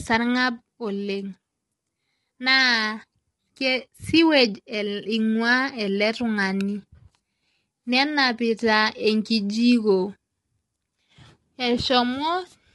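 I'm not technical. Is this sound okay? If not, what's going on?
No. The audio was likely squeezed by low-delay AAC compression, the kind used in video calls, which makes the speech sound rough and grainy throughout, with nothing above 11.6 kHz.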